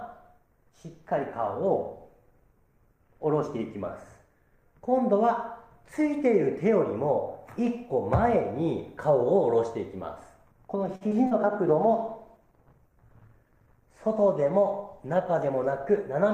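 At 10.95 s a packet arrived late and the jitter buffer ran dry, producing a short stall from a late packet. The receiver held the last sound for 53 ms until 11.03 s, then resumed where it had stopped. Nothing is lost, but that sound lingers with a faint buzzy dip.

Two short concealed packet losses follow. At 11.09 to 11.13 s, 20 ms of audio never reached the decoder, and at 11.27 to 11.33 s another 40 ms went missing. Each gap was patched by extending the preceding sound and blending back in, heard as a brief smear or wobble, more than twice as long on the second.

From 11.68 s to 16.14 s there is a call bitrate drop. The bandwidth estimate fell and the encoder went from 48 to 17 kbps, staying at the lower rate for about 4.4 s. Coarser coding and a trimmed top end leave the sound rough, watery and duller.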